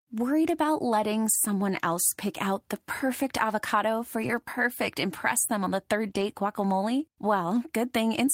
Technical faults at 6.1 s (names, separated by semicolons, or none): lost packet rebuilt from error correction